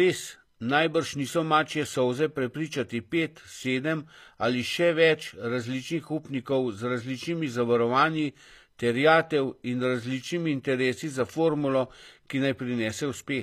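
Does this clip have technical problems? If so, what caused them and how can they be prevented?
Yes. Throughout the clip, HE-AAC compression likely rebuilt the treble at a bitrate that sounds near 24 kbps. Copied lower bands make sibilants gritty and metallic, and nothing sounds above 14.9 kHz. Encoding at a higher bitrate with standard AAC would prevent this.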